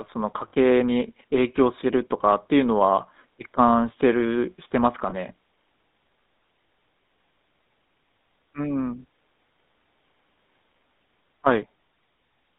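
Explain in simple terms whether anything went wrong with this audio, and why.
The whole clip carries the sound of the GSM full-rate codec, an early mobile-phone voice coder. It rebuilds speech from a simple vocal-tract model driven by coarse pulses, which gives the buzzy, gravelly roughness heard here, and the line passes only about 200 Hz to 3.7 kHz.

There are two brief stretches of lost GSM frames, at 0.48–0.52 s and 5.10–5.14 s. At those moments missing audio was covered by repeating the last good frame, producing a short rough, metallic ring. The gaps are too short to fade to silence.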